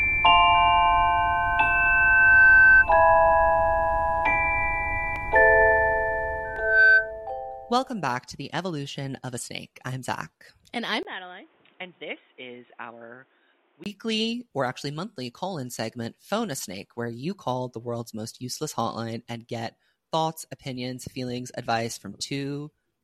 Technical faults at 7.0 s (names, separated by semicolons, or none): loudspeaker feedback squeal